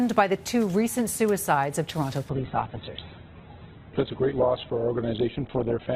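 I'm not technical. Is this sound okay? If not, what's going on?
No. There's an adaptive stream at a lower bitrate from 2.3 s to the end. At that point the audio suddenly turns dull, with nothing above about 4.2 kHz, so the crisp upper detail vanishes. A stream like this carries several quality versions of the same audio, and when the connection slows it switches to a smaller, lower-quality one. The switch happens without any gap, so it's heard as an abrupt drop in clarity.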